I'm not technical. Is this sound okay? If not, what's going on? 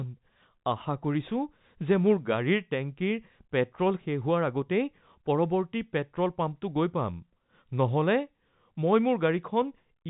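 Yes, there's nothing wrong with this speech recording. It has gone through ordinary G.711 telephone coding, so it has the narrow sound of a landline call, with nothing higher than about 3.8 kHz coming through.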